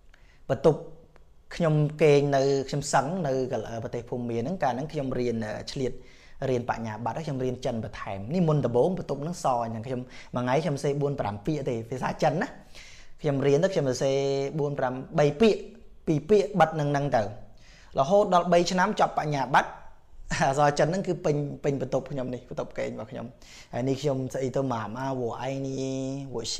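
Nothing in the audio stood out as a technical problem on listening.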